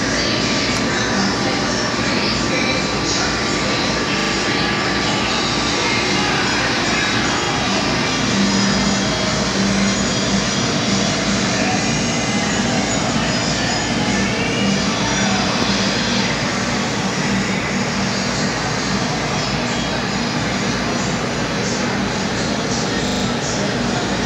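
Repeated buffer at 4.2–4.32 s, 7.44–7.48 s and 23.08–23.24 s: late-arriving audio makes the device replay the same short slice, fitting a 40 ms buffer, causing hard-edged stutters.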